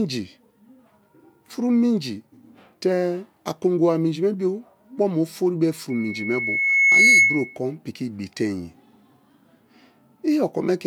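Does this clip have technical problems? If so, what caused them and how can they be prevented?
Yes. A loudspeaker feedback squeal runs from 5.90 s to 7.58 s, starting just after "ofori be" and ending before "kon piki". A steady 2.2 kHz tone swells over roughly a second until it sits around 10 dB above the speech. The microphone was picking up the loudspeaker it fed, and at 2.2 kHz the loop gain rose above unity, so that frequency kept recirculating and growing. To prevent it, keep the microphone out of the loudspeaker's coverage, reduce monitor gain, or notch the ringing frequency near 2.2 kHz.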